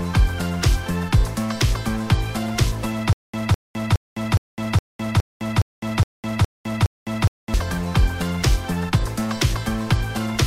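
From 3.13 s to 7.54 s, playback likely stalled: at each retry the player repeated the last short fragment it still held, then ran out of data. The result is a stutter with silent gaps. A burst of about 207 ms plays, then about 208 ms of dead digital silence follows, and the cycle repeats ten times at an even 415 ms pace. Whatever sound belonged to that stretch never plays and is lost.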